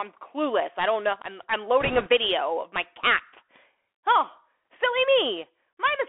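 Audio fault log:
throughout: Bluetooth CVSD headset codec. The audio is squeezed into a 300 Hz to 3.4 kHz band, and the one-bit delta coding points to a 64 kbps CVSD link. Fast, loud high content outruns the adapting step, so sibilants turn scratchy over a granular hiss. On a spectrogram, energy stops flat at 3.4 kHz.
1.80–2.09 s: bit errors on a Bluetooth voice link. Flipped bits at a rate of a couple of percent add a rushing, crackly noise. Each bit carries only a small step and the errors fade quickly, so there are no sharp clicks. A spectrogram shows a speckled noise patch within the band, and the waveform shows fuzz rather than spikes.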